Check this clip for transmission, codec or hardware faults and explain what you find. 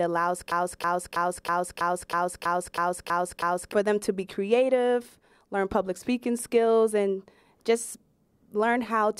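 One fault appears, a broken-record loop from 0.52 to 3.72 s. The stream or player likely stalled and kept resending its last held fragment, so a 323 ms slice repeats exactly ten times back to back. The speech due in that stretch is lost, and normal playback resumes at "for them to be".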